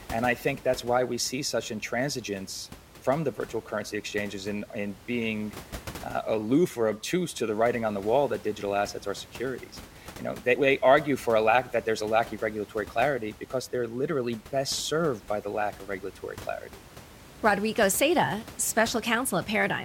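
No technical faults are present.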